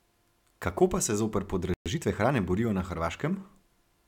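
At 1.74 s, right after "pa se zoper", the speech cuts out into silence for 120 ms, until 1.86 s. This is a playback stall: the output simply stops mid-flow and then resumes where it left off, with nothing skipped. The likely cause is the player running short of buffered data, or its audio thread being held up, so it had nothing to send to the output until it recovered.

From 1.86 s to 2.34 s, ending just before "borijo na", the speech runs hurried at about 1.25 times normal speed while keeping its pitch. This is time-compressed catch-up: after the stall the player works off its backlog by removing short slices of audio and cross-fading across the joins. The removed material is what makes the pace sound rushed.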